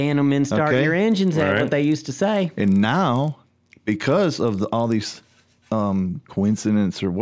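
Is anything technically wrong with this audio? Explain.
Yes. From 1.12 to 5.4 s the speech carries a 25 Hz ticking buzz, the resampler restarted on every block: each 40 ms block was converted from 48 kHz to 16 kHz alone, leaving errors at every edge.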